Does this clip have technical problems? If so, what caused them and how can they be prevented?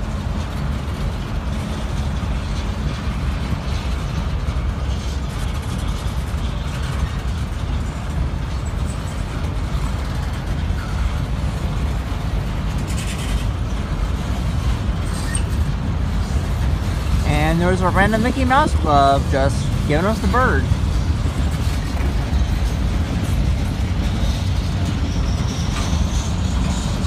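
Yes. At 5.44 s there is a brief glitch from damaged data in a compressed stream. Corrupted bytes made the decoder misread the frame there. It lost sync and jumped to the next valid frame header. Checksummed, error-correcting transport would prevent this.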